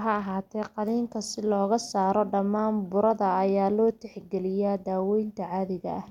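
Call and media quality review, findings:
No faults found in the speech recording. Nothing to attribute to any component in the chain.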